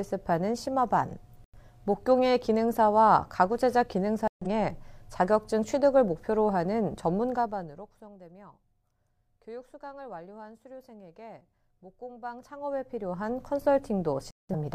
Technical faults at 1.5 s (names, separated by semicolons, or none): corrupt frame muted